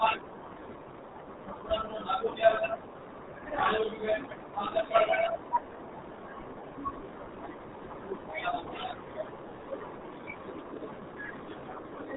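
Muffled, gargly speech with nothing above 3.8 kHz throughout points to the RealAudio 14.4 codec, heavily damaging the audio at what sounds like about 8 kbit/s.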